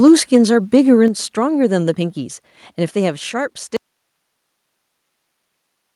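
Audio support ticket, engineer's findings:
Microphone overload, 0.06–0.37 s and 0.74–0.77 s: harsh crackle on the loudest peaks, about 2 dB over the converter's limit, tops flattened. Likely input gain set too high for the converter. Distortion rides the peaks only.

Microphone volume stepped down, 0.08 s (about 2 dB) and 1.08 s (about 5 dB): whole signal, background included, drops in single clean steps. Likely call software trimming device input after clipping. No ramp, unlike a fade or a compressor.

Audio dropout to a faint residue, 3.77 s to end: signal cuts abruptly to hiss about 50 dB below normal level. Likely capture signal lost with downstream path still live. Hiss persists, so not a mute or a natural pause.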